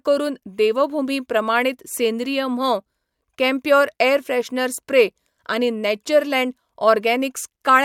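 No technical faults detected.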